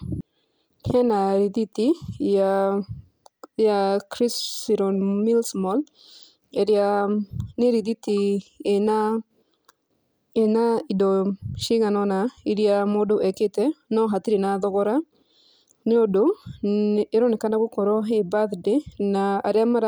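Listening to the speech recording, nothing stood out as a technical fault at any point.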